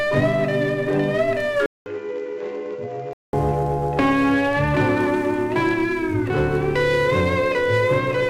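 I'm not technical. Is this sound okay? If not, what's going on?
No. From 1.66 to 3.33 seconds, the sound goes quieter and duller, as if the top end were cut away, with nothing above about 7.6 kHz. A faint new hiss sits underneath. There is also a short gap of about 0.2 seconds where it switches over. The likely cause is an input switched to a poorer device: the system briefly recorded through a different, lower-quality microphone, then switched back.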